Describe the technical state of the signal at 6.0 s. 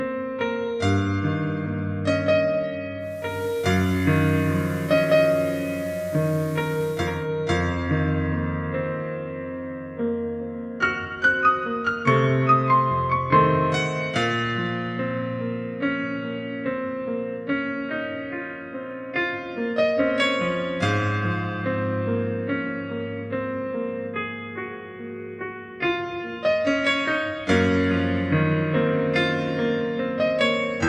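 At 6.0 s the signal is in a digital radio blend to analogue, from 2.98 to 7.31 s. The receiver lost its digital stream and cross-faded over 469 ms to FM. Hiss sits roughly 25 dB down. Level shifts about 1 dB.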